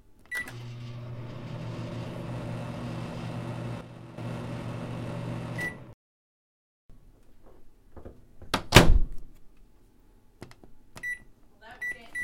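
A gain setting likely applied without a ramp drops the level by about 9 dB from 3.81 to 4.18 s, a sudden gain jump affecting sound and background together.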